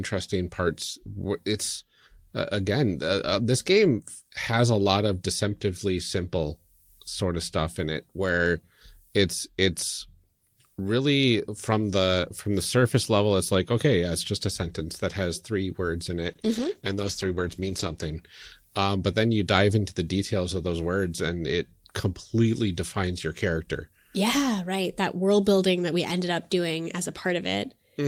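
From 16.28 s, after "has three words in", the speech turns rough, watery and muffled until 19.23 s, before "you dive into the". A call bitrate drop: the bandwidth estimate fell, so the encoder coded coarser and dropped the highs, consistent with 32 falling to 13 kbps.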